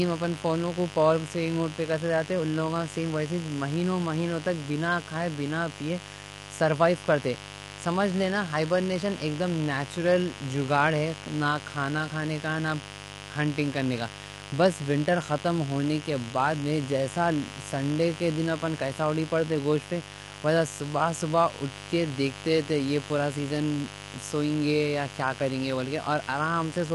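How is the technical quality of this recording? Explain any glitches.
The technical quality is poor, with two faults present from start to finish.

Mains buzz runs throughout. Switching spikes twice in every 50 Hz mains cycle leak in, stacking harmonics into a steady, raspy buzz only about 15 dB below the speech.

Low-delay AAC compression is also audible throughout, likely AAC-ELD. It codes about 500 frequency lines a frame with a low-delay window, leaving noise between the harmonics. The speech sounds rough and grainy, nothing remains above 11.6 kHz, and the damage suggests a low bitrate near 32 kbps.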